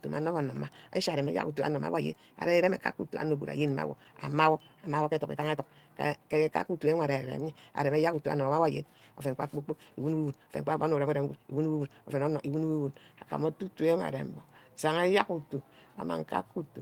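From 0.0 to 12.6 s the speech is a time-stretched section, sped up 1.42 times at unchanged pitch, likely by dropping short pieces, so it sounds rushed, unlike plain fast playback, which would raise the pitch.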